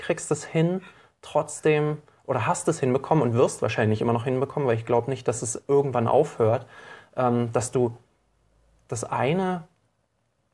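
No technical faults can be heard anywhere in the recording. Nothing in the audio calls for comment on technical grounds.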